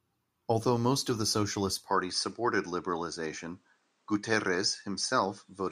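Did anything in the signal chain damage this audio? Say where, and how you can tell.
Yes: input switched to a poorer device at 1.90 s, likely at capture; speech then stops at 9.5 kHz, with no gap or level jump, adding faint noise.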